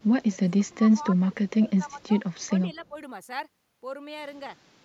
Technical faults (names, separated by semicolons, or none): speech suppressed in double talk